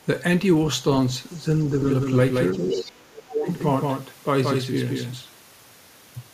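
At 1.3 to 1.42 s a faint scrap of another voice, roughly 40 dB below the main speech, slips through: the other side's voice leaking through, likely because the echo canceller left loudspeaker pickup in the microphone signal. Unlike a doubled track, it is a different voice, not a copy.

From 1.82 to 5.22 s the audio is a doubled track. A full-band copy about 5 dB quieter trails by about 200 ms and starts and stops abruptly. The likely cause is a second capture path or misaligned edit. Unlike room echo, it has no decay or reverberant colour.

From 2.55 to 3.48 s, speech suppressed in double talk makes the talker dip by up to about 30 dB over roughly a second. The canceller likely could not separate talker from echo while both spoke. Within that span, at 2.7 to 2.81 s, the other side leaks again, only about 10 dB down.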